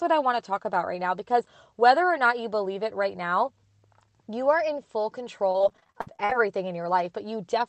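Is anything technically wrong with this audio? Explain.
Yes. From 5.50 to 6.32 s, just after "you are in full", the speech turns choppy and robotic. This is repeated packet loss: 18 gaps, the longest 60 ms, were patched by extending the preceding sound, covering 42% of that stretch. The clip went through a call codec, which cuts the audio off above 8 kHz.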